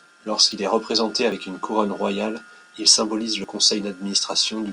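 A speech clip with three abrupt skips, at 0.52 s, 1.32 s and 3.44 s. Each is a jump forward, losing around 40 ms of sound. They fall just before "est représenté", before "une couronne royale il", and after "couronne royale il symbolise". The likely cause is a dropped buffer (overrun).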